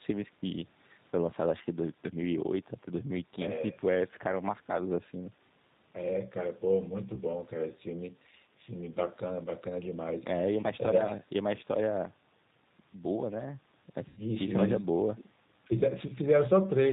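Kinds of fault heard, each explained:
G.729 codec, throughout: the audio is rebuilt from a vocal tract filter, a pitch predictor and a few pulses per frame, which fits an 8 kbit/s G.729A stream. Nothing above 4 kHz survives, and the speech sounds plainly rough, thin and synthetic.
VoIP packet loss concealed by the speech codec, 7.15 to 7.21 s and 14.09 to 14.21 s: the decoder extrapolates its last pitch and filter with falling gain, smearing the speech into a fading buzzy tone or coloured noise. The gaps fit about one and about eight lost 10 ms frames.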